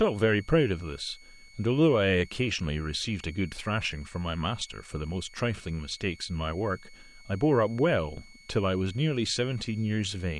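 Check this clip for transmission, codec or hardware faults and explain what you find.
One hardware fault is present: a switching supply whistle running through the whole speech recording. A power supply cycling in an audible burst mode puts a thin tone between 2.21 and 2.23 kHz, about 30 dB below the speech. Unlike mains hum, it sits high and wanders slightly rather than holding a fixed low pitch.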